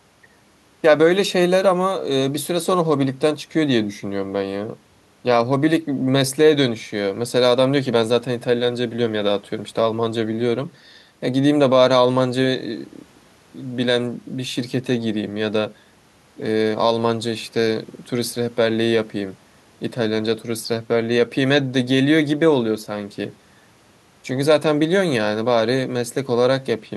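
No technical faults are audible.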